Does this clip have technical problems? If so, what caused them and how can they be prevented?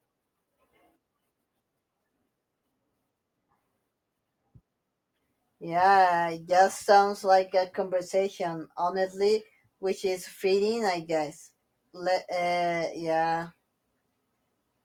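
No, the speech in this clip shows no audible technical faults, so there is nothing to trace or prevent.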